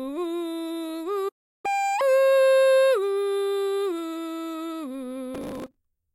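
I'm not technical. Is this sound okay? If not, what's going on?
No. At 1.28 s the music cuts out into silence for about a third of a second, until 1.66 s. This is a playback stall, likely the player running short of data or being held up, so nothing reached the speakers until it recovered.

From 1.66 to 2.01 s the music rushes along at double speed and jumps up in pitch by nearly an octave, then settles back. That is catch-up at higher speed: the player races through the backlog built up during the gap to get back on schedule.

From 5.35 to 5.77 s a gritty crackle tears across the music. This is processor overload crackle: the computer was too busy to prepare each tiny slice of sound, each a millisecond or two long, in time, so dozens were simply skipped, each leaving a small sharp-edged hole.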